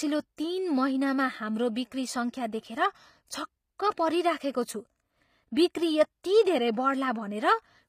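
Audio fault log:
throughout: HE-AAC compression, likely. The treble sounds synthetic, grainy and metallic, with s sounds turning lispy and nothing above 15.5 kHz. That fits band replication rebuilding the top from copied lower bands, and the damage is plainly audible, which fits a bitrate around 24 kbps.
0.37 s: pre-echo. A smear of hiss creeps in about 16 ms ahead of a sharp attack, softening its edge. The codec spread its quantisation noise across the whole block, so noise meant for the loud onset leaks into the quiet just before it.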